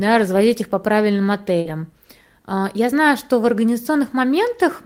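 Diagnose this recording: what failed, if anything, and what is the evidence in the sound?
The failure is in the network path of a speech call. From 1.61 to 1.67 s there is a short concealed packet loss: about 40 ms of audio never arrived, and the decoder filled roughly 36 ms of it by extending the preceding sound before fading back into real signal. It is heard as a brief smear or wobble. On a spectrogram the preceding sound runs on across the hole and then blends back into the real signal. The waveform shows the preceding sound continuing across the hole.

Overlapping that, from 1.65 to 1.71 s, is a lost packet rebuilt from error correction. The pattern fits two lost packets that were recovered from the low-bitrate redundant copies carried in the following packets, covering about 40 ms. Because of this there is no gap, but the audio turns rougher and grainier. A spectrogram shows a smeared, noisier texture with softened harmonic detail. 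The waveform stays continuous, with a fuzzier envelope.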